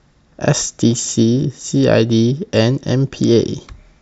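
Two single sharp clicks interrupt the speech, at 0.50 s and 2.88 s, each a thin vertical line across the spectrum. The likely cause is dropped samples: a handful of samples go missing, so the waveform leaps straight to a later value. Unlike a dropout, no audible gap or loss of sound occurs, since well under a millisecond disappears. The result is only an instantaneous tick rather than a silence.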